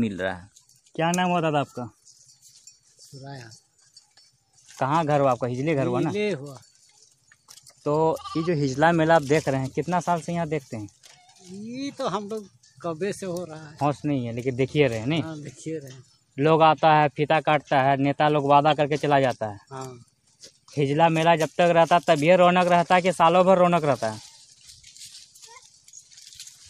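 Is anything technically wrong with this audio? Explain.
Yes. From 18.70 to 18.72 s there is a short, sharp blip, a burst of noise or chirp lasting only about 22 ms and peaking at roughly -15 dBFS. This is a corrupt frame decoded. A single compressed frame arrived with flipped bits, and the decoder played it anyway. The misread gains and codes placed energy at the wrong frequencies for just the length of that damaged frame.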